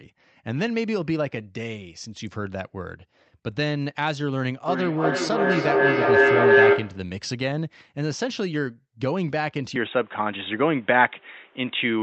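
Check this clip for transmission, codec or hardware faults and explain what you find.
Two faults are audible in the speech.

From 4.68 to 7.19 s there is a feedback howl near 400 Hz, rising to about 9 dB above the speech. The microphone-to-loudspeaker loop gains level on each trip, which comes roughly every 300 ms. Unlike echo, its repeats grow rather than fade.

From 9.76 s to the end, the tone and level shift by about 5 dB with no gap, and a new background noise appears about 35 dB below the signal. This is likely an input switched to a poorer device. Unlike a codec narrowing, the noise floor changes along with the tone.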